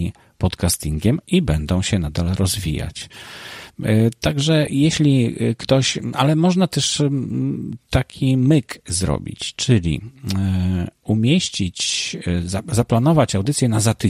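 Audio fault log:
4.67 s, 11.41–11.51 s and 13.28–13.54 s, DAB burbling: weak reception let bit errors, at roughly 0.1 to 0.15 percent, slip past error correction into the MP2 audio data. Corrupted samples put short blips of noise in single sub-bands, and corrupted scale factors make sub-bands jump in level for up to a frame, so the speech picks up brief burbling. The first lasts only about 6 ms, and the last, longest stretch points to 16 damaged frames.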